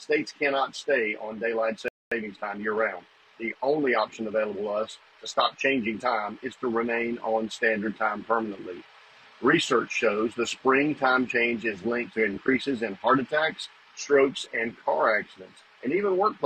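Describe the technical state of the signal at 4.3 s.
At 4.3 s the audio is in time-compressed catch-up, from 2.12 to 4.44 s. Small pieces are cut and cross-faded. Playback runs 1.1 times fast at unchanged pitch.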